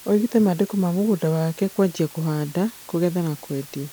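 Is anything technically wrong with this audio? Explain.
Yes. Throughout the speech, low bit depth with dither: samples are rounded to about 6 bits with dither added first, turning the error into a steady, even hiss well up, roughly 20 dB below the voice.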